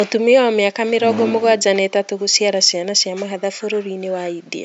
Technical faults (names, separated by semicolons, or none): none